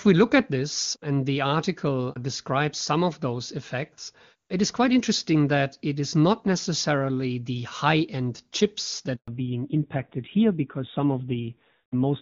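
At 9.16 s the speech cuts out abruptly, fading within a few tens of milliseconds into complete silence that lasts 120 ms, until 9.28 s. This is a handover gap: the call was passed from one network link to another, and while the switch was under way no speech frames reached the receiver. Whatever was said in that stretch is simply missing, and the decoder had nothing to play but silence.

When the sound returns at 9.28 s it is audibly duller and rougher, and it stays that way through to the end of the clip. This is a fallback to narrowband. Before the gap the call was in HD Voice, clean and bright in the way of AMR wideband at a high rate. After the handover the new link carried an older narrowband codec, so everything above 4 kHz is gone. The grainier texture fits a low rate such as AMR-NB at 7.4 kbit/s.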